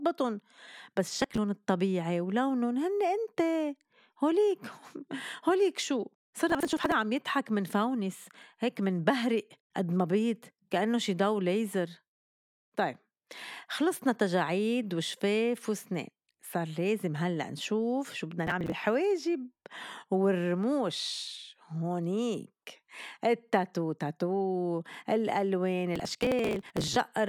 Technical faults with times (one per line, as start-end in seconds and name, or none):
1.18-1.38 processor overload crackle
6.50-6.92 processor overload crackle
18.47-18.72 processor overload crackle
25.96-26.96 processor overload crackle